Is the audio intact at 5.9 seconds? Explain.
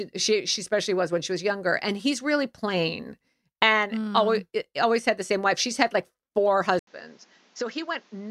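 Yes, at 5.9 seconds the speech runs on intact, with no dropout, click, distortion or other fault to be heard at that point.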